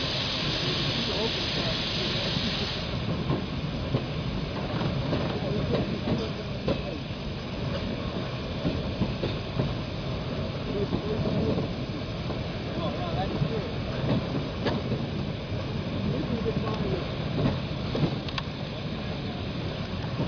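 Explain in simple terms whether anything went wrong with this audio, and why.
Nothing went wrong here; the audio has no audible faults.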